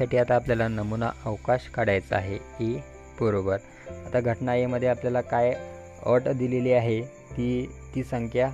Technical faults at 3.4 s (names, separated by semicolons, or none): none